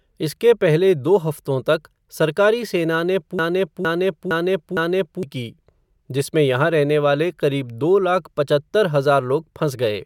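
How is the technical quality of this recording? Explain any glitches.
A broken-record loop starts at 3.39 s, just after "तक सरकारी सेना ने": a 460 ms fragment of speech repeats four times back to back until 5.23 s, likely because playback or streaming stalled and resent its last buffer, losing the intervening speech.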